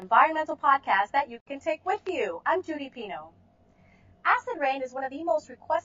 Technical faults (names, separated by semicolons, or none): channel delay (comb filtering); gap at a join of encoded pieces